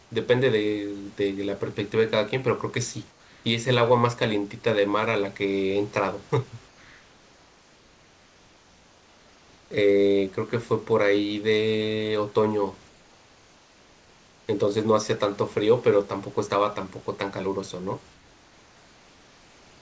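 During the pauses the sender has likely stopped transmitting and the receiver has filled the gaps with comfort noise in place of the background. At 3.11–3.44 s, 6.68–9.71 s, 12.89–14.48 s and from 18.14 s to the end, the real room noise, sitting about 31 to 33 dB below the loudest sound, gives way to a steady, featureless hiss about 3 dB quieter. The hiss shares the call path's band limit, with nothing above 8 kHz, as a wideband codec such as G.722 would give.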